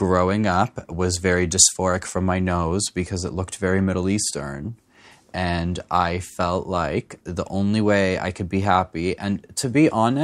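No technical faults are audible.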